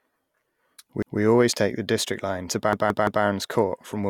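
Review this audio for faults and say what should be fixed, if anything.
Repeated buffer at 1.02–1.20 s and 2.73–3.24 s: new audio arrived late, so a 171 ms piece of speech replays, once then three times, with hard joins heard as stutters. The length fits an 8192-sample buffer. Prioritise the audio thread or add buffering so data always arrives in time.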